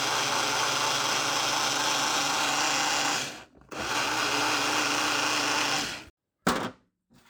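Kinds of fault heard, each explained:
No technical faults can be heard: the signal holds steady throughout, with no dropouts, distortion, or other disturbances.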